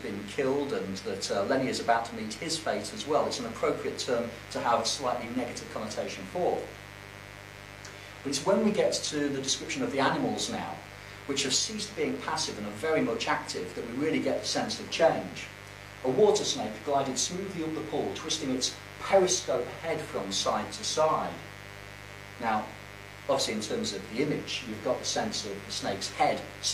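A raspy mains buzz runs under the sound for the whole clip, built on 50 Hz harmonics and sitting only around 15 dB below the audio. Switching spikes twice per cycle cause it. A spectrogram shows evenly spaced horizontal lines stacked into the kilohertz range.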